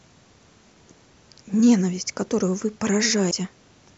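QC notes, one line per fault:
3.30 s, compressed frames skipped: the speech jumps ahead by about a tenth of a second, roughly five 23.2 ms frames. Overlapping frames smear the join into a soft blip. A spectrogram shows harmonics abruptly shifting with no sharp vertical click line.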